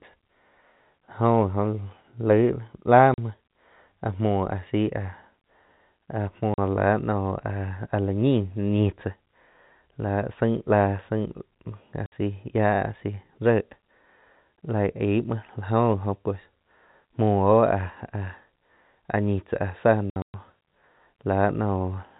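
Packets were dropped on the network path and the receiver played silence in their place, a packet loss filled with silence. The speech, carried over a telephone-band G.711 line, drops out abruptly at 3.14 s and 6.54 s for 40 ms each, and at 12.06 s for 60 ms, gaps that fit 20 ms packets. Between 20.1 and 20.34 s, about 180 ms vanish in scattered holes, the longest 120 ms. Each hole starts and ends with a hard edge.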